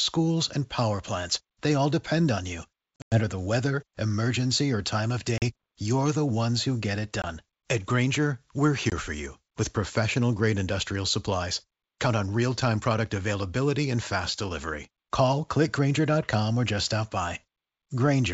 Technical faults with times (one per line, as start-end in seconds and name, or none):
2.96-3.20 packet loss on an ADPCM call
5.38-5.44 packet loss on an ADPCM call
7.22-7.25 packet loss on an ADPCM call
8.90-8.93 packet loss on an ADPCM call